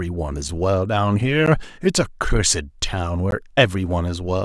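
A block of digital silence hits the speech at 1.46 s, where about 12 ms of samples drop to silence, and again at 3.31 s, where the hole lasts 15 ms. In each case the waveform is cut off mid-cycle and resumes abruptly with no fade. At these brief lengths the two gaps come across as sharp ticks rather than audible pauses in the speech.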